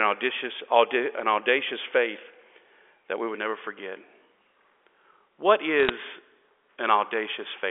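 From 5.8 to 5.9 s, a brief burst of crackle rides on top of the speech: bit errors on a digital phone line. On this G.711 A-law path, each flipped bit corrupts a single logarithmic sample, and a hit on a high-order bit, or on the sign of a loud sample, throws that sample far from its true value, giving a sharp tick. The error rate is only a few tenths of a percent, but the ticks cluster, which fits a handful of hit frames. Packet loss would leave gaps or smeared fill-ins. Here the speech carries straight through, with only the ticks added.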